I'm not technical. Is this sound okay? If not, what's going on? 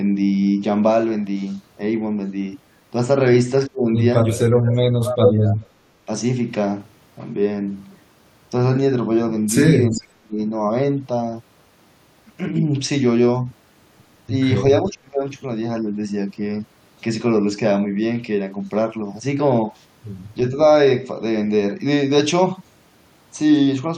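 No. Speech suppressed in double talk: the voice sharply dips or drops out at 3.67–3.88, 4.3–5.62, 9.92–10.39 and 14.82–15.23 s, likely because the echo canceller muted both sides while they overlapped.

Echo leak: a copy of the voice returns about 0.4 s late, loud at 5.26–5.33 s and faint at 9.92–10.03 s, likely loudspeaker sound getting past the canceller.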